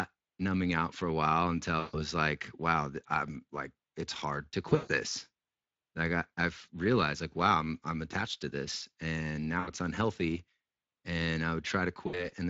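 Throughout the speech, Speex codec damage is plainly audible: the CELP coder leaves the voice hoarse and noisy, its excitation too coarse for a clean tone, a sound that points to a mid-range setting of roughly 20 kbps. On a spectrogram, harmonics look smeared and grainy, and any energy above 8 kHz appears as a diffuse, noise-like wash rather than distinct structure.

VoIP packet loss concealed by the speech codec interrupts the audio four times. At 1.79 to 1.97 s, between "out for a while" and "like wow I'm like", about 140 ms of audio is missing, which fits seven lost 20 ms frames. At 4.69 to 4.92 s, after "like it's hard to", 160 ms is lost across a 200 ms stretch, with the longest gap 140 ms. At 9.59 to 9.71 s, after "attached to this and", 80 ms is lost, and at 12.07 to 12.30 s, 60 ms is lost. In each case the decoder repeats its last pitch and filter with falling gain, so the sound stretches into a buzzy tone or coloured noise that fades, and stays weak briefly after recovery. 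A spectrogram shows flat, repeated harmonic bands thinning out, and the waveform shows a shrinking envelope.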